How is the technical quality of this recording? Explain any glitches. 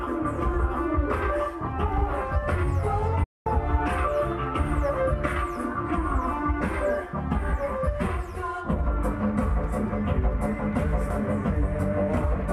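One fault stands out, a digital broadcast dropout from 3.23 to 3.47 s. The receiver stopped getting decodable frames, either because the signal was lost or because frames failed their error check, so it muted its output until valid data returned. The sound fades out over about 8 ms and leaves roughly 0.22 s of silence, a gap that fits a short run of discarded frames. Then it resumes further along, and whatever was transmitted during the hole is gone.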